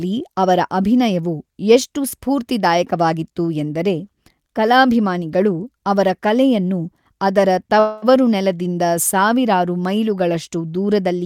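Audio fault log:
7.79–8.05 s, call audio freeze. Just after "ಕಲಾಭಿಮಾನಿಗಳು ಅವರ ಕಲೆಯನ್ನು ಅದರ", the last sound stretches into a fading buzz for 0.23 s. The speech then resumes exactly where it stopped. Nothing is lost, but everything after runs 0.23 s late. Delayed packets likely emptied the jitter buffer.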